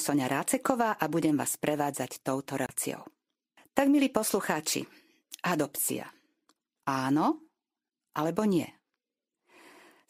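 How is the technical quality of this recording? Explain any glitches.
One glitch stands out, a CD skip in the speech. From 2.66 to 2.69 s the sound mutes for about 30 ms, then resumes from another point on the disc's spiral where the laser jumped. A waveform shows a brief flat gap with a discontinuity; a spectrogram shows a narrow vertical click and a blank slice.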